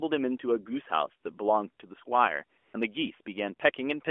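A short speech clip over a narrowband mobile line, with the lightly coloured, band-limited sound of AMR-NB that fits its 12.2 kbps mode. The fault is AMR comfort noise from 2.58 to 2.74 s: for about 160 ms the phone stopped sending speech frames, and the receiver filled the gap with smooth synthetic noise that replaces the real background and switches in and out.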